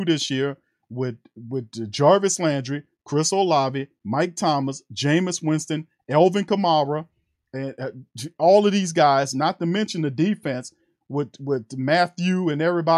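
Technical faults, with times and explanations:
No technical faults can be heard in this speech.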